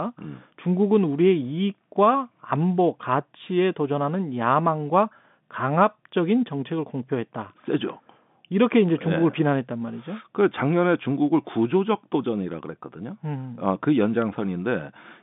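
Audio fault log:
0.19 to 15.21 s, word clock ticks: sharp clicks of uneven strength recur about every fifth of a second, some seventy in all, heard over the narrow telephone-band speech. An unlocked receiving clock slips against the sender, dropping or repeating one sample each time, a rate that fits a mismatch of around 100 ppm.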